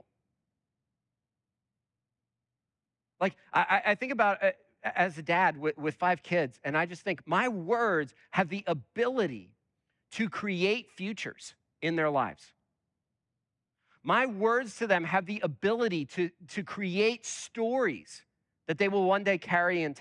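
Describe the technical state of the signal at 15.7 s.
At 15.7 s the speech signal is intact, with no technical fault audible at that moment.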